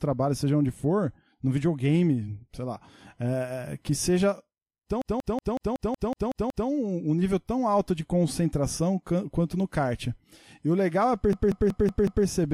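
At 5.02 s to 6.69 s and again at 11.33 s to 12.26 s, a system hang loop takes over the speech. The system stalls while the sound hardware keeps replaying one ring buffer, so a single 186 ms slice, which fits an 8192-sample buffer, repeats exactly, nine times and then five, as a machine-gun stutter at 5.4 Hz. Unlike a buffer underrun, the repeats are identical and regular, and the speech afterwards seems to resume with essentially nothing missing.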